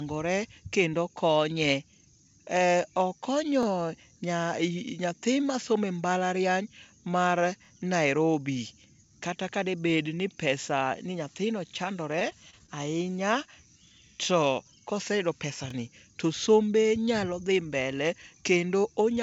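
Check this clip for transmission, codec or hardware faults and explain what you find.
There are two faults here, with the speech coming over what sounds like a G.722 call path that tops out at 8 kHz.

Overlapping chunks at 3.63, 7.65, 11.68 and 15.70 s: each new 4-second chunk starts about 25 ms early, so that sliver plays twice, giving a quick stutter-click.

Repeated packet loss (robotic sound) from 12.19 to 12.69 s: several short dropouts, none longer than about 24 ms, get patched by stretching the last sound, which makes the speech choppy, with pieces missing.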